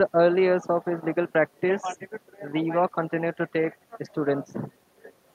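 Nothing in this speech recording points to a technical fault anywhere in the signal.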